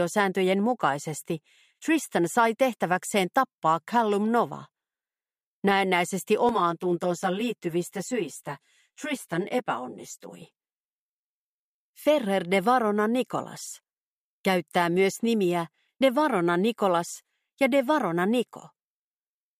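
From 6.49 to 10.42 s the sound turns hollow and phasey. This is channel delay (comb filtering): one channel runs around 10 ms behind the other, and when the two are summed to mono, the shared content cancels at evenly spaced frequencies, starting near 40 Hz and repeating up the spectrum. The notches stay fixed for the whole stretch, which separates it from flanging or phasing, where the notches sweep audibly.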